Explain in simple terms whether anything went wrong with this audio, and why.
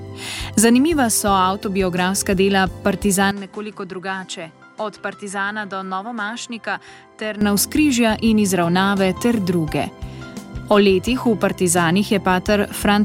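From 3.31 to 7.41 seconds, the sound turns duller and noticeably quieter, then clears up again. There is no gap at either change. The likely cause is an input switched to a poorer device, one that drops the highest, crispest sounds.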